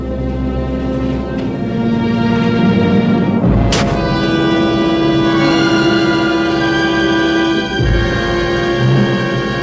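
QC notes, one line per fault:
No faults to note for this clip.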